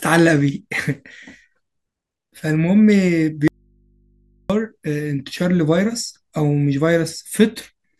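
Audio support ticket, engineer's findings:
Audio dropout to a faint residue, 3.48 to 4.50 s. Source signal likely interrupted upstream while the downstream input stayed live, about 1.0 s lost. Speech cuts out abruptly to mains hum from the open input, roughly 40 dB below programme level, then resumes mid-flow.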